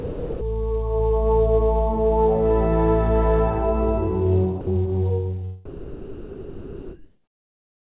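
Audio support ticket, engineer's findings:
Sound dropped by the voice detector, 0.00–0.41 s and 4.61–4.67 s: real sound replaced by flat noise, likely sender VAD misjudging sound as background. Spectrogram shows featureless smear and abrupt structure gaps, and the waveform shows a low, even envelope.

Comfort noise in place of the background, 5.65–7.91 s: the background, about 40 dB under loud passages, becomes steady, detail-free hiss, about 5 dB different in level. Likely DTX comfort-noise fill, uniform texture on spectrogram. Band edge at 4 kHz throughout, consistent with a narrowband call codec.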